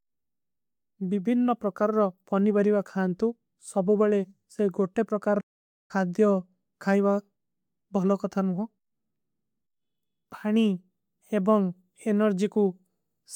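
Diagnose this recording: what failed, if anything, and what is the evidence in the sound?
A playback stall cuts the speech off mid-flow from 5.40 to 5.91 s, leaving about 0.49 s of silence before it resumes. The waveform shows a flat gap and the spectrogram a blank vertical band. The player likely ran out of data or was blocked.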